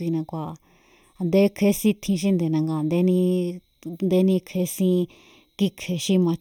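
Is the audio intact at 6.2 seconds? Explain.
No, there's channel delay (comb filtering) running throughout: one channel lags by about a third of a millisecond, so the mono sum cancels at evenly spaced notches starting around 1.5 kHz, sounding hollow and phasey.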